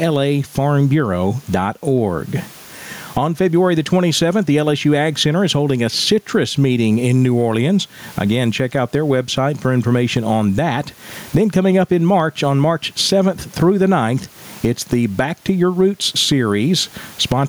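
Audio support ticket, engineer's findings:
Gain pumping throughout. Room noise, about 41 dB below speech; gain swing of around 20 dB. Likely cause: mic input gain set far too high, with a fast limiter clamping every peak. Dynamics squashed.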